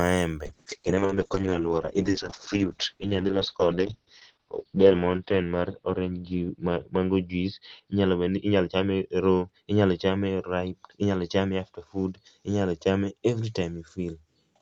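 A call bitrate drop hits this speech recording from 0.46 s to the end: the bandwidth estimate collapses and the encoder is starved, consistent with falling from about 64 to 7 kbps. The audio turns coarse and muffled, top end cut from 20 kHz to 6 kHz.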